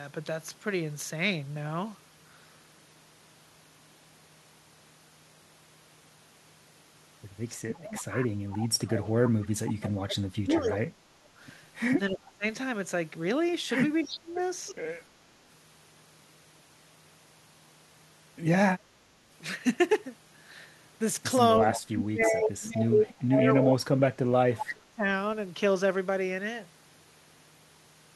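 From 7.55 to 12.45 s, then 14.04 to 14.38 s and 21.59 to 25.05 s, the talker keeps dipping, by around 30 dB at worst. That's likely speech suppressed in double talk, with the canceller turning its own talker down along with the echo while both sides talk. Overlapping those stretches you also get echo leak: a copy trailing by 318 ms at 7.95–8.68, 9.83–10.77, 14.08–14.74, 21.73–22.26 and 23.19–23.61 s, about 5 to 15 dB under the speech. That's likely loudspeaker pickup the canceller didn't fully remove.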